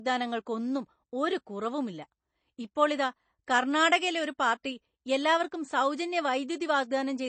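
From start to finish the speech stops dead above 8.3 kHz and sounds watery and swirly, likely MP3 compression starved of bits, which fits 32 kbps.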